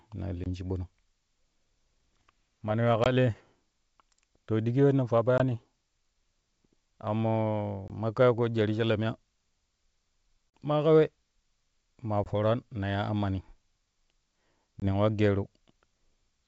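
Short hard-edged gaps at 0.44, 3.04 (after "mana yuwa"), 5.38, 7.88, 10.50 (before "ma ka"), 12.24 and 14.80 s, each followed by brief distortion. This is packet loss on an ADPCM call: about 20 ms went missing each time (40 ms at 10.50 s), and the decoder's predictor and step size briefly lost track of the sender's.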